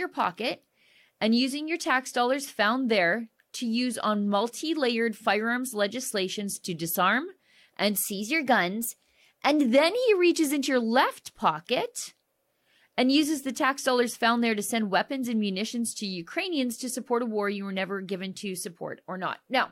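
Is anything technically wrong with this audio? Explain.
Yes. From 8.06 to 9.66 s there is what sounds like a drift correction step: software keeping two clocks in step has likely changed the playback rate in one jump to refill or drain its buffer. For those 1.6 seconds the speech runs about 5.7% fast, with pitch raised by roughly 95 cents, nearly a semitone. The voice is suddenly sharper and hurried, then snaps back to its normal speed and pitch at 9.66 s.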